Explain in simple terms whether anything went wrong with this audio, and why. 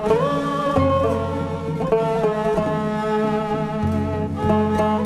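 The clock that times the audio converter was being shaken at a steady rate of around 2 kHz, a fault called periodic clock jitter. This adds extra tones beside everything in the sound, strongest on high-pitched parts, giving a rough, metallic edge throughout the clip.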